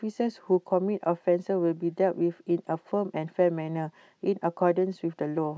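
Listening closely to this recording of speech, nothing stood out as a technical problem at any point.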